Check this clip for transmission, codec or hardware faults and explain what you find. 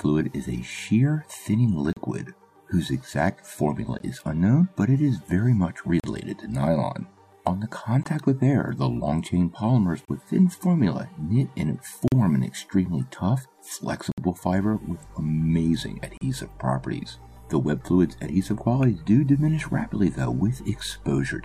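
There's one fault here: gaps between stream segments, at 1.93, 3.99, 6.0, 8.03, 10.05, 12.08, 14.12 and 16.17 s, roughly every 2 s. Segment timestamps don't quite meet, so playback inserts silence, hard-edged holes of 16 to 61 ms, without losing any audio.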